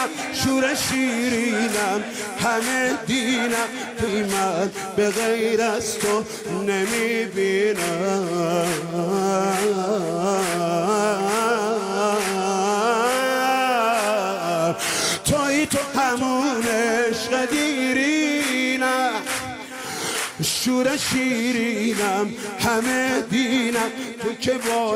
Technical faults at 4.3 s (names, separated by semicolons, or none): jitter buffer speed-up